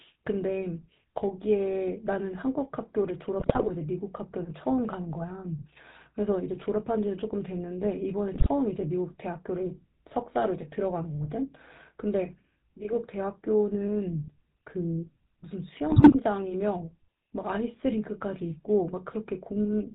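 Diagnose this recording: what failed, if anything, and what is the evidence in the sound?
Codec stage: GSM full-rate coding throughout. The speech is buzzy and gravelly with nothing above 4 kHz, from pulse-excited vocal-tract modelling. Plain band-limiting would sound smooth instead.

Network stage: GSM bit errors at 3.40–3.71 s, 8.34–8.48 s and 15.90–16.16 s. Corrupted filter, pitch and gain values cause squawks, pops and level bursts, not the silent gaps of lost packets.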